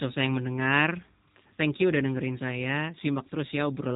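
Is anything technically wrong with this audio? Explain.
Yes, the whole clip has gone through a G.729 codec. The speech is rebuilt from a vocal-tract filter, pitch predictor and a few pulses per frame, which fits an 8 kbit/s stream. So it sounds rough and faintly synthetic, with nothing above about 3.8 kHz.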